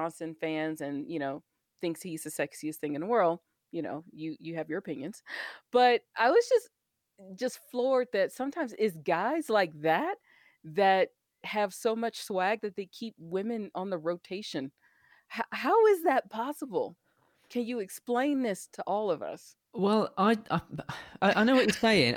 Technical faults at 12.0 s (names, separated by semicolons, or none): none